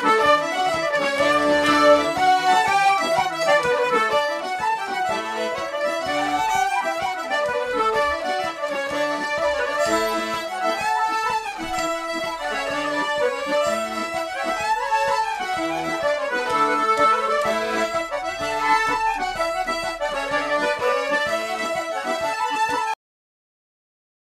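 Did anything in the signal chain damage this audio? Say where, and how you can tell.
Yes. There's a cut-off end at 22.94 s, where the sound stops mid-event and drops straight to silence with no decay or tail, staying silent for the last 1.3 s or so. That points at the buffer stage on the way out: the final buffers of audio were never written or never played, so whatever was sounding just gets chopped rather than finishing naturally.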